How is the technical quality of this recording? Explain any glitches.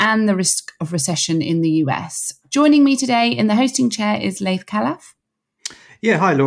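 No technical glitches or faults.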